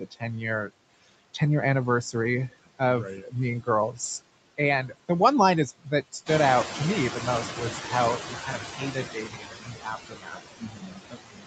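All through the speech you can hear noise suppressor artifacts. The suppressor pulls the steady background down by about 21 dB, so the noise sinks in the gaps and swells back under the talking, on top of the 8 kHz-wide call audio.

The speech cut by the noise suppressor shows up early, at 0.00–0.23 s, 0.67–1.41 s, 2.49–4.22 s and 5.79–6.29 s. Each time it mistakes bits of speech for noise and dips them by about 19–21 dB, so soft consonants and word tails sound swallowed. That adds up to anywhere from a short blip to half a second per stretch.

Around 6.5 s the room noise jumps by about 11 dB. This is the noise suppressor catching up: from 6.26 s the noise comes through with only about 10 dB of reduction, then sinks gradually as the estimate adapts, which takes about 2.35 s and finishes around 8.61 s.

From 7.55 s to the end, speech gets cut again, with dips of up to about 22 dB that leave parts sounding faint.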